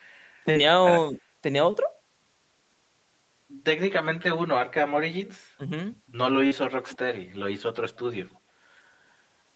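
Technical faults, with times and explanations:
throughout: channel delay (comb filtering). One channel trails the other by roughly 10 ms, and summing them to mono cancels shared content at evenly spaced frequencies starting near 50 Hz. The notches stay fixed for the whole clip, giving a steady hollow, phasey colour rather than any moving swoosh.
0.51, 1.71 and 6.47 s: short concealed packet loss. About 40 ms, 20 ms and 40 ms of audio failed to arrive, and the receiver extended the preceding sound to bridge each gap before blending back. These are brief isolated smears or wobbles, not level dips, which separates them from suppression.
5.58 to 5.64 s: speech suppressed in double talk. The speech dips by about 10 dB for a moment, most likely because the echo canceller, faced with both sides talking at once, turned its own talker down. It is a loss of level, not a smeared fill.
6.89 to 6.98 s: echo leak. 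A faint delayed copy of the speech, around 25 dB below it and trailing by 272 ms, slips through briefly, likely residue from a loudspeaker that the echo canceller on that side missed. The clear lag separates it from comb filtering.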